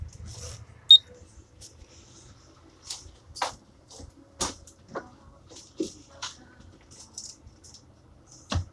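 No technical faults can be heard anywhere in this recording of sounds. Nothing in it needs a timestamp or a fix.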